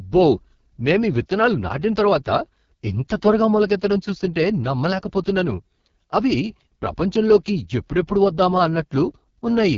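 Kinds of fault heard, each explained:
AMR wideband (HD Voice) codec: speech rebuilt from a pulse-excited vocal tract model at 6.6 kbit/s sounds rough and raspy, with noise-filled top ending near 7.1 kHz, unlike narrowband's 3.4 kHz.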